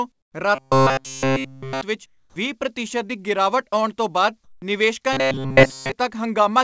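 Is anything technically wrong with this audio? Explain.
Yes, the speech has three kinds of fault, two of them recurring.

Comfort noise in place of the background appears at 0.12–0.34 s, 2.06–2.36 s (just before "ਵੀਹ ਪ੍ਰਤੀਸ਼ਤ ਦੀ ਗਿਰਾਵਟ") and 4.44–4.62 s (just after "ਗਿਰਾਵਟ ਆਉਣ ਤੋਂ ਬਾਅਦ"). The likely cause is discontinuous transmission. The sender went quiet during pauses, and the receiver synthesised a smooth, featureless hiss roughly matched to the room. In the first two gaps that hiss drops by about 10 dB and about 19 dB, so the background audibly sinks. At 4.44 s it is about 1 dB louder, so the level holds but the texture turns flat.

Robotic sound from repeated short buffers affects 0.55–1.81 s, ending just before "ਵਿੱਚ ਵੀਹ ਪ੍ਰਤੀਸ਼ਤ ਦੀ", and 5.13–5.92 s. Both stretches are likely the playout side starving for fresh audio and looping the last fragment. The whole of each span is recycled, which stamps a rigid 133 Hz buzz onto the sound. 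That pitch fits a buffer of about 7.5 ms being replayed over and over. The result is a metallic drone that only loosely tracks the syllables.

The onset is clipped by the voice detector at 2.26–2.36 s, just before "ਵੀਹ ਪ੍ਰਤੀਸ਼ਤ ਦੀ ਗਿਰਾਵਟ". The likely cause is that the detector reacted late when sound resumed, so the first 100 ms were never sent and comfort noise stood in for them. The phrase therefore bursts in abruptly, with no soft lead-in. The band also stops at 7 kHz, consistent with the G.722 wideband codec on the call path.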